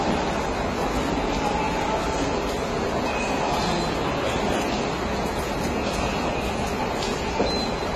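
From start to finish the audio shows the signs of transcoding between lossy codecs. Nothing is present above 13 kHz, and the swirling, smeared texture of a very low-bitrate stage sits alongside a second, different layer of coding artefacts. That combination points to a low-rate HE-AAC encode later re-encoded to AAC-LC at a modest rate. The second encoder spends its bits reproducing the first one's damage, and the earlier bandwidth limit remains.

At 4.36 to 4.38 s a single loud pop cuts in, peaking about 10 dB above the surrounding signal. It is a short, sharp transient laid on top of the sound, which continues underneath without a break. The likely cause is a sudden voltage step or pulse entering the chain, such as a plug, a switch, static discharge or a driver glitch. The following circuitry shaped that pulse into a brief click.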